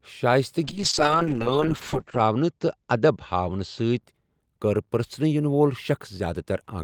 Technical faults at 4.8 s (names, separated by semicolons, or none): none